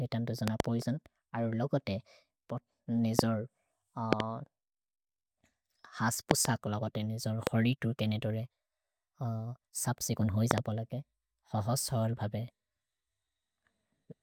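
Loud pops at 0.48–0.62 s just after "तन् तो", 3.19–3.21 s, 4.13–4.22 s, 6.31–6.47 s just before "लो बोले", 7.47–7.49 s and 10.51–10.60 s. Each is a sharp thump, heard as a double pop except at 3.19 s and 7.47 s, and roughly 20 to 25 dB above the speech, which carries on underneath. The likely cause is sudden voltage spikes from a plug, switch or static discharge entering the signal chain.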